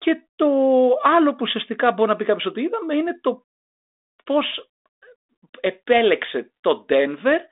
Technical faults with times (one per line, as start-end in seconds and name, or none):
none